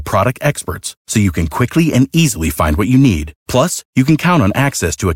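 Speech recording with no audible technical faults.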